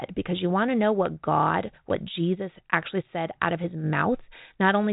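No technical faults can be heard anywhere in the speech.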